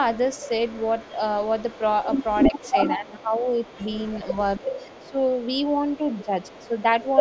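From 0.0 to 7.15 s an echo leak runs under the speech: a faint copy trails the speech by 282 ms, roughly 15 dB below it, likely from a loudspeaker echo the far end's canceller missed. A spectrogram shows each syllable's harmonics ghosted, fainter, about 0.28 s later.

Speech suppressed in double talk follows, likely the canceller ducking this talker while both ends overlap. The speech drops by up to around 10 dB in short bites between 2.47 and 3.68 s, then at 4.34–4.65, 5.11–5.18 and 5.98–6.32 s, and by only about 5 dB at 6.68–7.04 s. The waveform envelope shows notches, and the spectrogram shows the bands thinning there. The energy stops at 8 kHz throughout.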